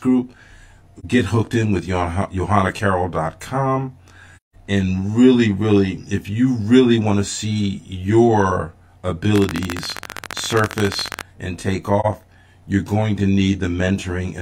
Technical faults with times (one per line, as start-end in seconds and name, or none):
0.00-14.41 channel delay (comb filtering)
0.99-1.05 AAC frame loss with muting
4.37-4.55 AAC frame loss with muting
9.36-11.20 train of clicks
12.00-12.06 AAC frame loss with muting